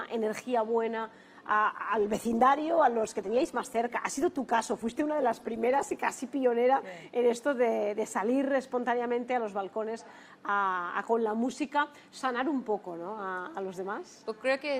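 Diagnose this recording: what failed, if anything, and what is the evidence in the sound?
A call bitrate drop hits the codec stage, driven by the network. From 1.01 s to 6.13 s the sound turns coarse and rough. That fits a fall from about 64 kbps to roughly 17 kbps. The encoder had far fewer bits until the estimate recovered.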